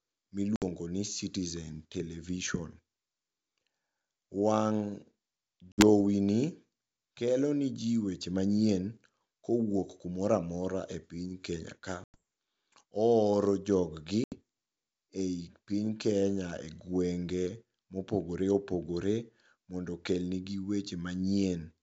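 Packet loss on an ADPCM call drops short runs of speech at 0.56, 5.72, 12.04 and 14.24 s, just after "jog gi". Each gap is silent, 60 to 100 ms long, a few packets' worth, and the longest falls at 12.04 s. The decoder's predictor and step size lose track of the sender's, so speech resumes after each hard-edged hole slightly distorted before settling. Around these gaps the G.722 wideband sound, consistent with 64 kbit/s, stays clear.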